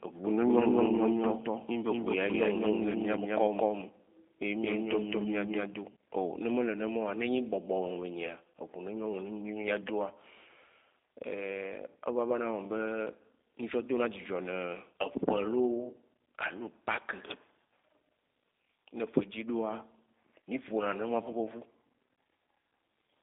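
From start to finish the speech has passed through the G.729 codec, and the sound fits the 8 kbit/s G.729A variant. The coder rebuilds each 10 ms frame from a vocal tract filter, a pitch predictor and a sparse pulse excitation. The result is plainly audible as a rough, slightly synthetic voice. The band is confined to roughly 250 Hz to 3.7 kHz, with nothing above 3.8 kHz, so the sound is thin and lacks sibilance.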